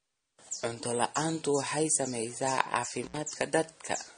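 Transcoding between lossy codecs runs throughout: nothing remains above 9.7 kHz, with smeared, swirly artefacts layered together, likely from an AAC-LC pass near 32 kbit/s re-encoded as MP3 near 40 kbit/s. Intermittent contact from 3.03 to 3.17 s: a loose connection opens for about 70 ms, cutting the speech out with crackle at both edges and faint hiss in the gap.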